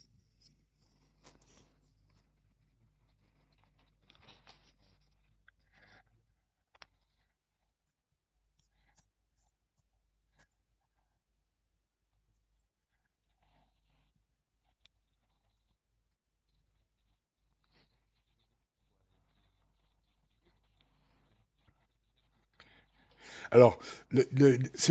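Right at the tail, from about 23.09 s to the end at 24.91 s, there's an automatic gain rising fault. The gain control decided the input had gone too quiet and started cranking its gain up bit by bit, so over that last 1.8 seconds or so the speech and the background noise swell up together rather than the level holding steady. The call path's band limit, with nothing above 8 kHz, is present throughout, but that part is just how the codec is set up.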